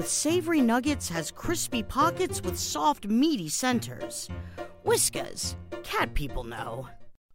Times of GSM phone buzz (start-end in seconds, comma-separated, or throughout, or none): none